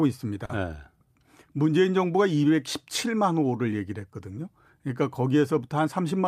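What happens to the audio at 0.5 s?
Right around 0.45 to 0.51 s there's a short stall from a late packet. A packet showed up late, the jitter buffer ran dry, and the receiver stretched the last bit of speech for about 40 ms until it arrived. Nothing is lost, but that sound hangs on a touch too long with a faint buzzy dip, and everything after sits 40 ms later.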